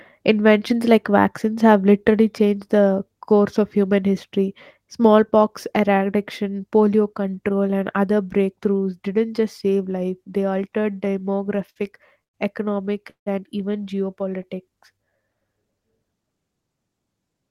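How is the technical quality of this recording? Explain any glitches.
The recording suffers from network playback problems in its second half: a stretch of stuttering, two short freezes, and a passage of slowed-down speech.

Repeated stalls (stutter) run from 10.73 to 11.78 s, beginning after "just save life they" and ending before "economic and even". Packets reached the receiver later than playback needed them, so the jitter buffer emptied twelve times. Each time, the receiver extended the last bit of sound until data arrived. These fills total 170 ms, about 16% of that span, and the longest is 59 ms. No speech is lost, but the delivery judders and drags.

Two call audio freezes follow, at 12.24 to 12.36 s just before "economic and even", and at 13.10 to 13.28 s just before "and even". The likely cause is packets held up in transit, leaving the buffer empty. The receiver briefly carried the last sound forward, then fell to silence for about 100 ms and 120 ms respectively. 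Playback then resumed where it had stopped, inserting gaps of 105 ms and 162 ms without dropping any speech.

A jitter buffer slow-down occurs from 14.37 to 15.66 s. With its reserve depleted, the buffer rebuilt it by repeating individual pitch periods and small pieces of pauses, adding 166 ms. Speech in this stretch plays at about 88% of normal speed with unchanged pitch, so sounds come out slightly stretched and drawn out.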